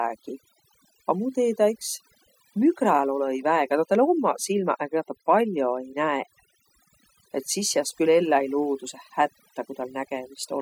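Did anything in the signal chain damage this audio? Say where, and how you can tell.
Yes: overdone noise removal, applied at the processing stage and present throughout. Gaps between phrases fall to near silence with twinkling specks. A spectrogram would show isolated flickering dots and ragged, holed-out speech bands where quiet components crossed the suppression threshold.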